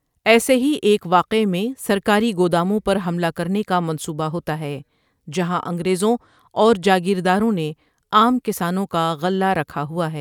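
Speech recording with no audible technical faults anywhere in the signal.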